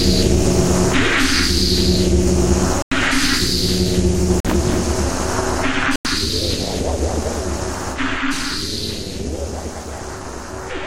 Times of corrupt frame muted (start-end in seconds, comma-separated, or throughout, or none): 2.82-2.92, 4.40-4.46, 5.96-6.06